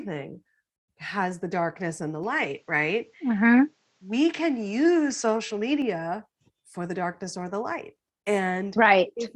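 Input switched to a poorer device from 2.24 to 5.82 s in this speech clip, starting right after "the darkness and the": the sound abruptly narrows, with nothing above 8.1 kHz, and a new noise floor appears about 45 dB down, with no gap and little level change, likely from the recording input moving to a lower-grade microphone.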